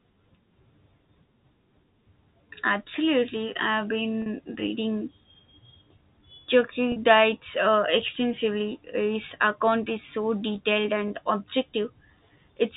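Packet loss with pitch repetition occurs at 4.22 to 4.26 s, 6.92 to 6.96 s and 11.08 to 11.10 s. Each gap is bridged by repeating the last pitch period. The 40 ms gaps, consistent with two 20 ms packets, and the 20 ms gap sound like brief buzzy holds rather than silent dropouts. The telephone-band G.711 path runs throughout, limiting the audio to below 4 kHz.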